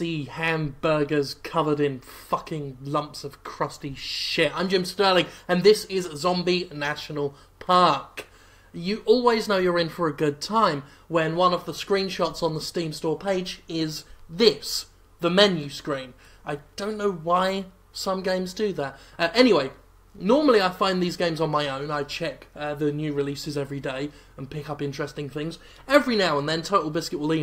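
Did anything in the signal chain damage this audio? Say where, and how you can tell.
No, nothing in the chain from capture through to playback shows any audible damage anywhere in the audio.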